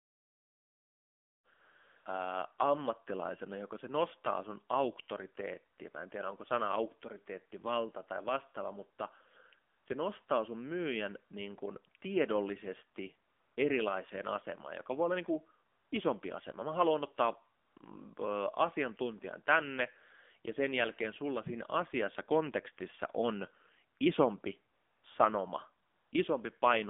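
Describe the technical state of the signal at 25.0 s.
At 25.0 s the signal sits inside a stretch of AMR comfort noise running from 24.74 to 25.04 s, about 300 ms. The phone stopped sending speech frames for that span, and the receiver filled the gap with synthetic noise built from a rough description of the background's level and spectral shape. It sounds like a smooth, even hiss that switches in and out, replacing the real room sound. On a spectrogram it shows as a flat, featureless band with abrupt vertical edges at both ends. On a waveform it looks like a uniform low-level block.

Underneath, the AMR narrowband mobile codec is audible throughout. Content is confined to roughly 250 Hz to 3.5 kHz, so a spectrogram shows a hard ceiling with nothing above it and little at the bottom. The coarse pulse-driven coding of each frame gives a buzzy, synthetic edge that plainly fits a low bitrate around 7.4 kbps, and it turns any background into a warbling texture.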